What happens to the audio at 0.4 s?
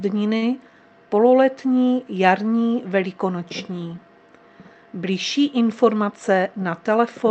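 A short stall from a late packet runs from about 0.37 to 0.44 s. A packet missed its playout time and the jitter buffer ran dry. The receiver stretched the last sound by 45 ms to cover the gap. It then resumed where it left off, so nothing is lost. Everything after plays 45 ms later than before. You hear a brief held or smeared moment, with a faint buzz or dip.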